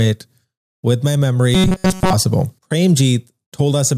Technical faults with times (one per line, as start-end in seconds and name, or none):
1.54-2.13 robotic sound from repeated short buffers